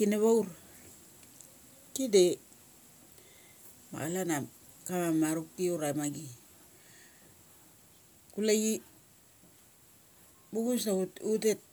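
No technical faults can be heard anywhere in this speech recording.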